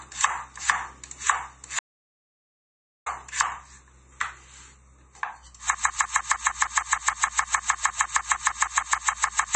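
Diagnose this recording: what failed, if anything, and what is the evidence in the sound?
Throughout, the sound is watery and swirly, with nothing above 8.3 kHz. The cause is likely MP3 compression at the codec stage. The fixed treble cut-off and weak frequency lines switching on and off between frames fit a starved bitrate around 32 kbps.

From 1.79 s to 3.06 s the sound stops dead for about 1.27 s into silence, with no room tone, then resumes mid-flow. This is an audio dropout to silence, likely at the input or driver stage, where the feed was lost while zeros kept being written.

From 5.75 s to the end, a 154 ms fragment repeats exactly, back to back, about 25 times. This broken-record loop likely comes from a stalled playback or stream buffer that kept re-sending its last held chunk. Everything after 5.75 s is lost.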